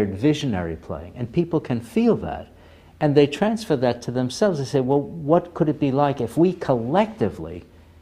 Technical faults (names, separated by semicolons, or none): none